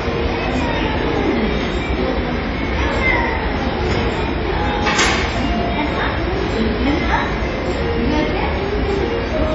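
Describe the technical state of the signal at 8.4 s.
At 8.4 s the sound carries the heavy smearing heard throughout, likely from WMA compression. Long transform blocks spread quantisation noise into a washy, ringing hiss that breathes with the signal. Nothing survives above 10.7 kHz, fitting roughly 32 kbps. A simple low-pass filter would only dull the sound, not add this swirl.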